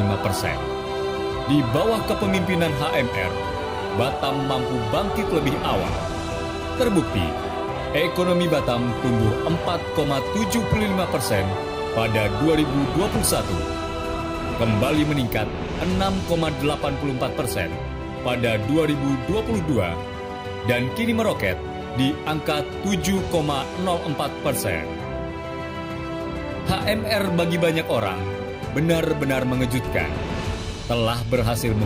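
No technical faults can be heard anywhere in the recording.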